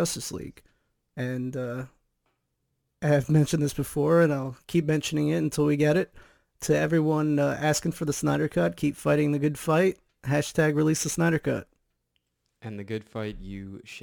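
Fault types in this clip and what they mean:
Crude rate conversion: The sample rate was changed by simply dropping samples, with no filtering. The pattern fits 48 kHz converted to 44.1 kHz. Throughout this speech, it leaves a gritty, inharmonic fizz, roughly 30 dB below the voice, that follows louder and brighter sounds.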